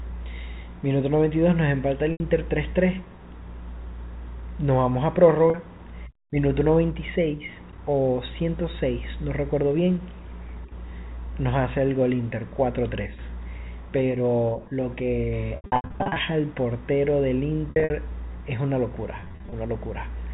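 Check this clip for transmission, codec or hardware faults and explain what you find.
The clip has one fault, packet loss with pitch repetition, at 2.12 s (80 ms), 5.5 s (40 ms), 15.56–16.16 s, 17.7–17.9 s and 19.2–19.52 s. The sound briefly holds a buzzy, frozen tone and then resumes. The receiver is repeating the last pitch period to bridge the lost packets. The later three are scattered bursts, with gaps up to 80 ms.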